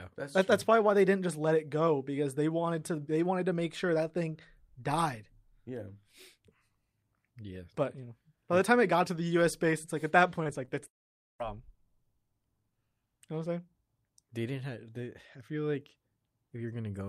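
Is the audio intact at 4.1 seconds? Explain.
Yes, the speech at 4.1 seconds is intact, with no audible dropout, glitch or other fault at that moment.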